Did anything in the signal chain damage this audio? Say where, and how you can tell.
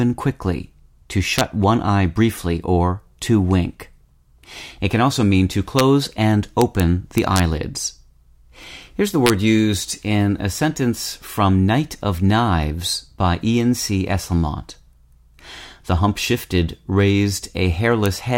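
Yes: integer overflow in an integer gain or sample-format conversion stage, heard as violent cracks on speech peaks at 1.39–1.41, 5.79, 6.62–6.80, 7.18–7.40, 9.26–9.30 and 18.06 s. Peaks exceeding full scale by only about 0–1 dB wrap to the opposite sign instead of flattening. That full-range flip makes them far harsher than clipping.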